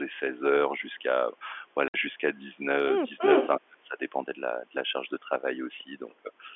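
A telephone-band speech recording, narrowed to the usual line band by G.711 coding, with three separate faults. At 1.88 s there is a 60 ms hole of packet loss filled with silence. The sound stops dead and restarts at 1.94 s, and the length fits three 20 ms packets. Unlike a fade or a gain dip, nothing is left in the gap, and its length is a whole multiple of one packet. From 3.17 to 3.48 s a delayed copy of the talker comes back about 341 ms late, which is an echo leak. This delayed copy is roughly as loud as the direct sound or a little louder. The likely cause is a loudspeaker at the far end whose echo canceller let part of the signal through. What separates it from reverberation is the single, distinct repeat after a fixed delay, rather than a smooth decaying tail. Between 3.58 and 4.0 s, for about 0.4 s in all, the level sinks in pieces by as much as about 35 dB, which is speech suppressed in double talk. 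This likely happens while both ends are talking at once. Unlike packet loss, the drops are uneven in depth and length instead of clean silent slots of fixed size.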